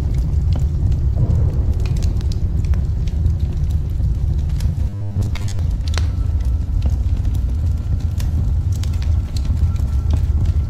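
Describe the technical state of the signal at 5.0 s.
At 5.0 s the signal is inside a stretch of robotic sound from repeated short buffers, running from 4.89 to 5.59 s. The sound collapses into a rigid, metallic buzz pinned at 100 Hz while still loosely tracking the original. The likely cause is audio arriving too seldom, so a segment of about 10 ms is replayed to fill the gaps, replacing most of the real material. Unlike a stutter or dropout, there are no silent gaps, just a steady fixed-pitch drone.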